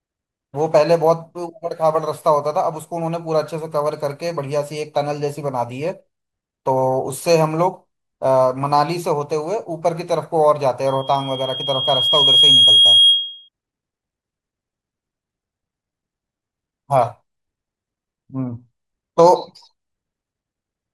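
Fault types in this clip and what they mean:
Loudspeaker feedback squeal: the microphone picks up its own loudspeaker, and near 3.3 kHz the loop gain tops one, so a pure tone swells over roughly a second and a half from 10.87 s to 13.49 s, ending about 10 dB above the speech. Its self-reinforcing rise sets it apart from a steady interfering whine.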